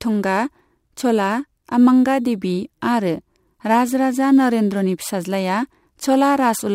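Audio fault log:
Throughout: crude rate conversion. The speech carries a gritty, inharmonic fizz that rises with louder and brighter syllables. The pattern suggests samples were simply repeated rather than filtered, which fits a jump from 44.1 kHz to 48 kHz. The repeating timing error sits only around 30 dB below the speech. Unlike codec artefacts, which warble and smear, these tones are tied to the signal level, and they vanish in silence rather than lingering as noise.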